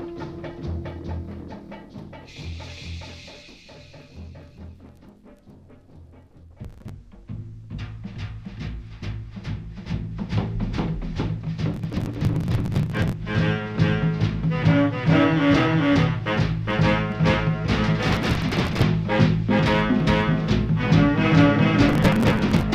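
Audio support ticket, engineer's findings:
Doubled audio track throughout. A second full-band copy trails the original by roughly 400 ms at about the same level, with no decay or room colour. Likely cause: a second capture through a slower path, or an edit holding two copies out of step.

Processor overload crackle at 6.65–6.89 s, 11.74–13.13 s, 18.10–18.83 s and 21.88–22.63 s. The second burst is the longest. Gritty tearing rides on the sound. Missed buffer deadlines leave hard-edged skips, which fits buffers of about 10 ms. It stops when the load passes.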